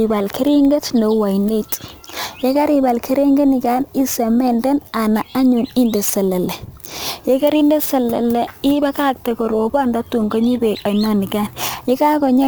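A gritty, inharmonic fizz rides on the speech from start to finish, strongest on loud passages and sibilant, high-pitched sounds, sitting roughly 25 dB below the voice. This is crude rate conversion: samples were simply dropped or repeated to the nearest position rather than filtered, and the slip pattern, which fits a change from 48 kHz to 44.1 kHz, generates shifted, inharmonic copies of the speech.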